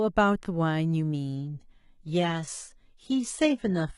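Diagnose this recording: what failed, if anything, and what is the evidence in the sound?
The network link slowed, so the adaptive stream at a lower bitrate took over from 1.36 s onward: treble above 11.1 kHz vanishes abruptly, without a gap, and codec artefacts thicken.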